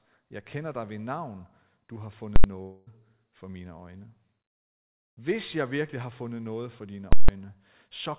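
A speech recording carried over a call path whose G.711 mu-law coding leaves nothing above 4 kHz, and it contains two bursts of invalid numbers at full scale. The first runs from 2.36 to 2.44 s, right after "ved navn du har". The second runs from 7.13 to 7.29 s, after "fundet noget for dine". In each case a calculation produced invalid or infinite values that were clamped to full scale for an 80 ms and then a 160 ms block. Each is heard as a very loud pop at its start and end with no sound in between. From 2.62 to 2.89 s, ending just before "for mine øjne", there is a fault that sounds like a long network dropout, likely caused by about 240 ms of audio never arriving. The receiver covered the whole gap with a fading buzz continued from the last sound rather than falling silent, and the missing stretch of speech is lost.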